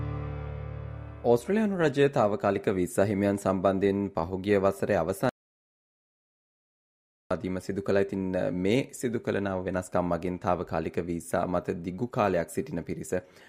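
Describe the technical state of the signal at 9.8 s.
Nothing at 9.8 s points to a technical fault: the signal is intact at that moment.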